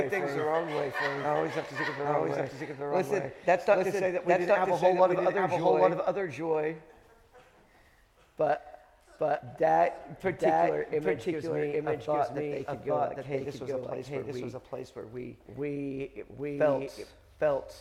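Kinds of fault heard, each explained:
Doubled audio track: A second, full-band copy of the entire sound runs underneath the original for the whole clip, trailing it by roughly 0.7 s and at about the same level, so every event is heard twice in close succession. The repeat is clean, with no decay or added room colour, which points to a likely cause of the same signal being captured again through a slower path, or two copies left out of alignment in an edit.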